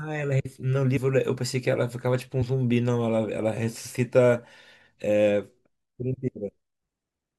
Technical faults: compressed frames skipped

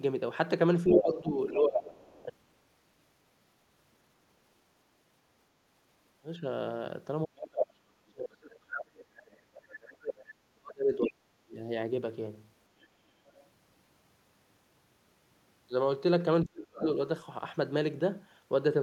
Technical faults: speech suppressed in double talk; other side's voice leaking through; background gated by the echo canceller

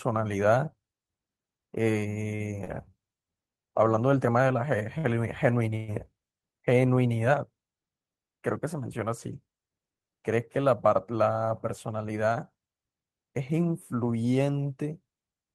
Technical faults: short stall from a late packet; call audio freeze

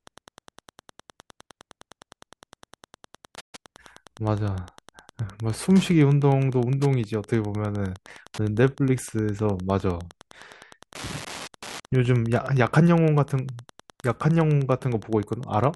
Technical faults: Wi-Fi interference; playback stall

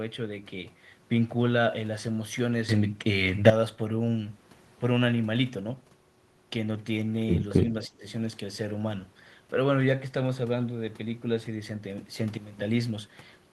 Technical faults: sudden gain jump; speech suppressed in double talk

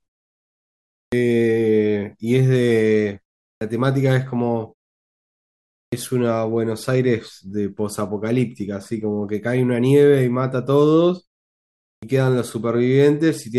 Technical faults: clipped start after a pause

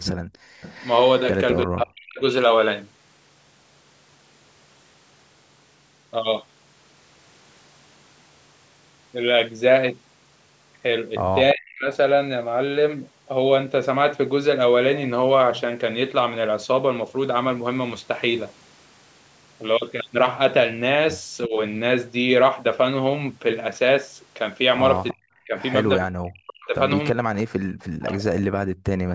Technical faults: echo leak; background gated by the echo canceller; speech suppressed in double talk

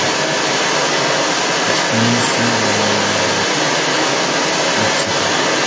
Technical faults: other side's voice leaking through

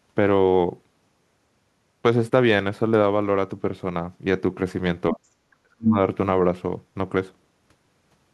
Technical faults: speech suppressed in double talk

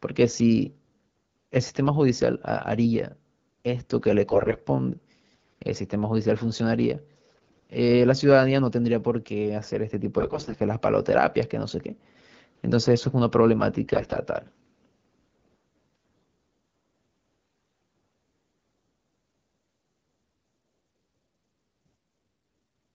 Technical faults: AMR bit errors

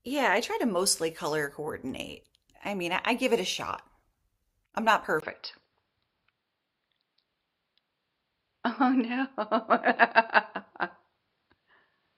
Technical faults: input switched to a poorer device

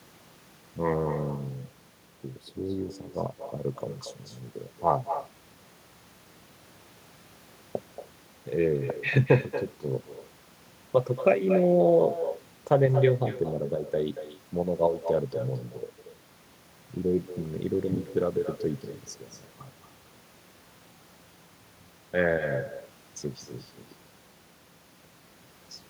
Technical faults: echo with no canceller

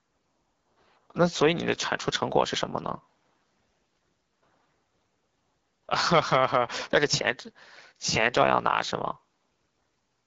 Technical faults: AMR wideband (HD Voice) codec

